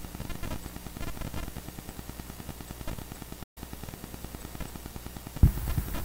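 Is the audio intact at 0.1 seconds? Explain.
Yes, at 0.1 seconds the audio plays through cleanly with no dropout, click, distortion or other audible fault.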